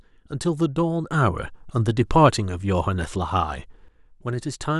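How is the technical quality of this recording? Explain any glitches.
There's one real problem here: a sudden gain jump on this speech. At 1.11 s the level steps up by about 7 dB in a single sample and stays there until 3.88 s, where it drops back just as abruptly. The likely cause is a digital gain change, a setting or bit shift, applied without a ramp. Because it hits the whole signal, the background noise rises and falls right along with the speech, so you hear the room jump too.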